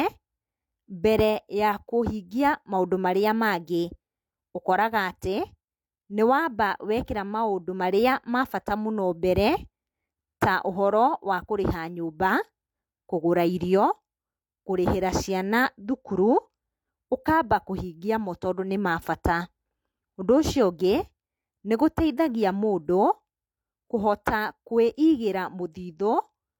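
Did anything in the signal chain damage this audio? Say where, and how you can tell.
Yes. The codec stage left pre-echo at 24.24 s in this speech. A short hiss leads a sharp attack by about 17 ms, and the onset sounds softened. The transform block spread quantisation noise, sized for the loud attack, into the quiet moment before it.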